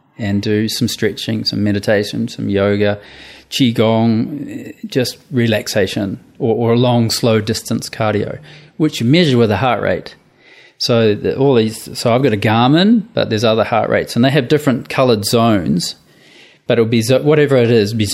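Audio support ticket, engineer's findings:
No faults found on playback.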